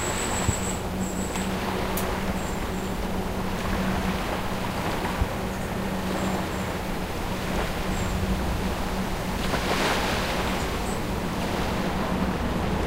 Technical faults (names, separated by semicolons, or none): loud pop